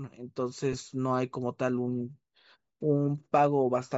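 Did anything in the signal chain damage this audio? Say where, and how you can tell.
Yes, two problems, both on the wireless link. The whole clip has a plainly audible breathy, grainy edge on the speech, with the top end sounding hollowed out and replaced by a fizzy wash. That points at the codec stage, most likely Bluetooth LC3 compression running at a fairly low rate, something around 32 kbps with 10 ms frames. At that rate the encoder drops much of the upper spectrum and the decoder fills the gaps with shaped noise, which is the grain you're hearing.

Then there's a brief glitch from about 0.73 to 0.75 s, a tiny smeared, noisy blip where the sound loses its definition for an instant. That's lost LE Audio frames, at the network/transport stage. The damaged stretch lasts about 10 ms, which fits a single dropped 10 ms frame. The decoder covered the hole by reusing the previous frame's spectrum with randomised signs, so you get a short noisy smear instead of a hard dropout or click.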